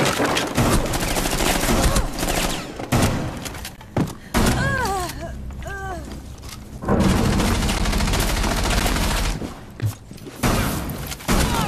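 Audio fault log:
3.76, 4.78, 6.78, 7.79, 8.80, 9.81 s: gap between stream segments. Segment timestamps leave 6 to 15 ms holes filled with silence, which appear as flat, hard-edged blank columns about one second apart.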